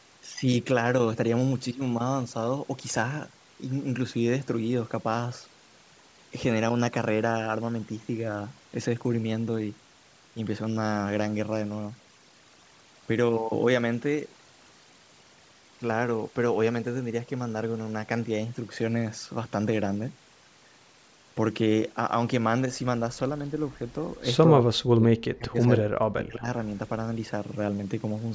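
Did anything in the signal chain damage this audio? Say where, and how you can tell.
Yes. Call processing: a noise suppressor set too strong runs throughout, leaving near-silent gaps with twinkling specks. This is overdone noise removal, gating bands near its noise estimate.

Between 24.48 and 26.48 s the speech dips by around 40 dB in pieces, about one and a half seconds in total. The likely cause is speech suppressed in double talk by the echo canceller.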